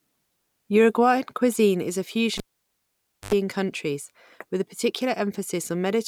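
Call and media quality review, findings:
Cable pulled and plugged in, 2.37 to 3.34 s. Pop, then near silence for about 0.92 s, then a short 50 Hz mains buzz of roughly 90 ms as the tip touches first, then a second pop when the speech comes back. Check the connector or lead at the mic or interface.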